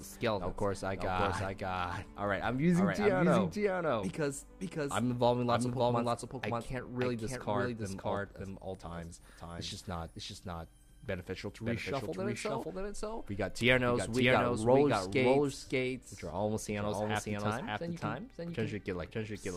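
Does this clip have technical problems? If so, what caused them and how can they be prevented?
Yes. A slower second capture path or an out-of-step edit likely put the same audio in twice, creating a doubled audio track throughout: a dry, full-band copy trails about half a second behind at roughly equal level. Route each source through one path only, with no duplicate layers.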